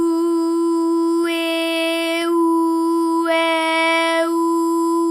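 Two sharp, isolated clicks occur at 1.24 s and 2.22 s. Each is likely caused by dropped samples: a handful of samples, well under a millisecond, go missing, so the waveform jumps abruptly. No sound is lost, but each jump leaves a thin vertical line across the spectrum.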